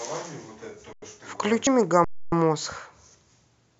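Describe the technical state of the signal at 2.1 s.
The speech stops dead from 2.04 to 2.32 s, about 280 ms of flat silence, then resumes softly where it left off: an underrun with held sample, the converter freezing its last value until data returned.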